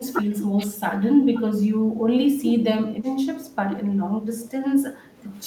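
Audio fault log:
0.00–2.67 s, 2.84–3.17 s and 3.33–5.30 s, speech suppressed in double talk: the speech sinks and breaks up in patches, dropping by around 10 dB in the first stretch and around 5 dB later. This likely happens because both sides talked at once, so the echo canceller turned the near talker down along with the echo.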